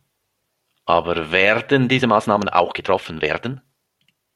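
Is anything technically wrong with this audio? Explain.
Yes, there's a time-stretched section in this speech clip. From about 1.96 s right through to the end, the pace suddenly jumps to roughly 1.7 times normal speed while the pitch stays put. That's likely software squeezing the audio to fit a shorter slot, dropping small chunks and butting the remaining pieces together so the voice doesn't go chipmunk. What you hear is a rushed delivery.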